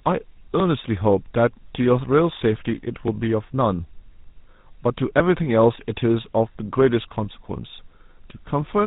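Throughout, the speech sounds rough, muffled and warbly, with nothing above 3.8 kHz. This is tandem speech coding: each link decoded and re-coded it, the last through a GSM full-rate coder.

At 3.08 s there is an abrupt jump, skipping around 70 ms of speech. This is likely a dropped buffer (overrun), where samples were overwritten before being read.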